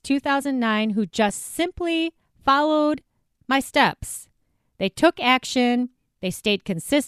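Lost LE Audio frames at about 1.29 s in this speech clip leave a brief smeared, noisy blip, consistent with a single missing 7.5 ms frame that the LC3 decoder concealed by repeating the previous spectrum with randomised signs, through what is likely Bluetooth LC3 compression.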